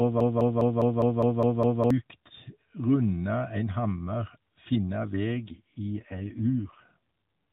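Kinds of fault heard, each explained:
Broken-record loop: From the very start until 1.90 s, the same 0.2 s fragment repeats identically, back to back, eight times, already under way when the clip opens. The likely cause is a player or stream that stalled and kept resending the last piece it held, so the audio due in that stretch is lost. Unlike an echo or reverb tail, each repeat is exact, with no decay and no overlap.
AMR rate drop: From 5.33 to 6.97 s the speech turns rougher, buzzier and more synthetic, then recovers. The roughness points to the mobile codec being pushed from about its 12.2 kbps mode down to roughly 5.9 kbps, with fewer bits left for the voice. Unlike a bandwidth drop or a dropout, the narrowband ceiling near 4 kHz stays the same and nothing goes silent. Only the texture coarsens.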